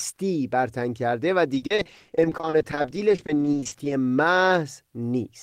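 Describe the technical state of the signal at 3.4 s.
At 3.4 s the speech sits inside repeated packet loss (robotic sound) running from 1.54 to 3.92 s. Gaps of up to 40 ms recur throughout, each patched by extending the preceding sound and covering about 42% of the span. This gives a sustained choppy, robotic texture rather than one isolated dropout.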